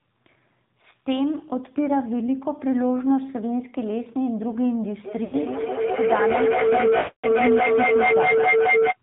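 The whole clip runs through the AMR narrowband mobile codec, so nothing gets above 4 kHz. The speech has that buzzy, synthetic edge you get from a low AMR-NB mode, and it sounds like something near 7.4 kbps.

From 5.04 s there's feedback howl. Two devices in the same room are feeding each other through the call, and each trip round the loop gains level. It narrows to a tone around 500 Hz, repeats round the loop roughly every fifth of a second, and peaks about 4 dB above the speech until 8.98 s.

Inside that stretch you also get lost AMR speech frames. At 5.24 s an 80 ms gap gets smeared over as the decoder replays its last good settings with falling gain. At 6.98 s a longer 260 ms run stretches the sound out and fades it to nothing, and the speech comes back rough.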